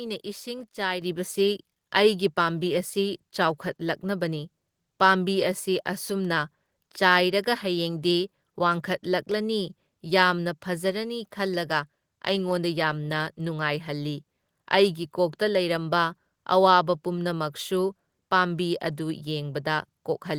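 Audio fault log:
1.02 s, microphone volume stepped up: right at the start the whole input jumps up by about 7 dB in one go, and it stays there. The voice and the room noise behind it get louder together, which tells you it's the device's input volume being raised rather than the talker leaning in. That's the call software deciding the mic was too quiet and bumping the level in a single step instead of easing it up.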